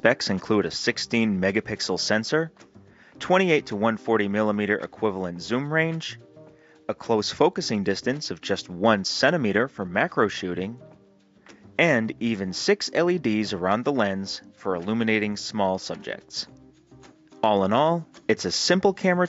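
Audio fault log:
No technical faults are audible anywhere in the signal.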